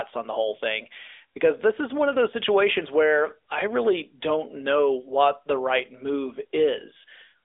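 AMR narrowband mobile codec damage runs throughout the speech. The signal has passed through a mobile speech coder that works at 8 kHz and rebuilds each 20 ms frame from a vocal-tract model excited by a few pulses. Nothing above 3.8 kHz survives, and the band is squeezed to roughly 300 Hz to 3.6 kHz. The plainly audible buzzy, synthetic edge fits a mid-rate mode of about 10 kbps.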